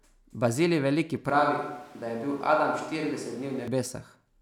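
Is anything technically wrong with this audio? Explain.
Yes. From 1.30 to 3.68 s the speech turns suddenly roomy and hollow, losing bass, with background noise rising to about 25 dB below the speech, then snaps back. This is likely a switch to a distant microphone. The level barely changes, but the abrupt switch and the rise in room noise distinguish it from added reverb or an equaliser change.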